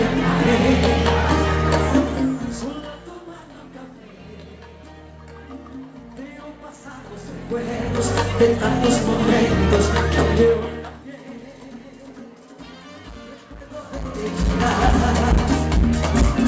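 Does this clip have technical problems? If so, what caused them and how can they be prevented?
No, there's nothing here that sounds like a problem, and the way the top end stops around 8 kHz is simply what you'd expect from a G.722 call link.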